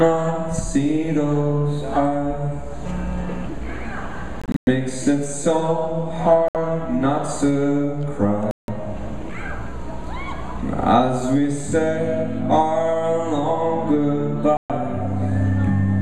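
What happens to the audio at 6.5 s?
The audio drops out to silence from 6.48 to 6.56 s, then resumes further along, as if it had kept playing through the gap. This is likely a Bluetooth dropout: packets reached the headphones too late and were discarded. About 64 ms of audio is lost.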